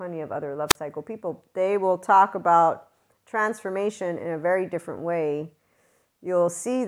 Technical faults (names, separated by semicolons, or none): wireless microphone squelch dropout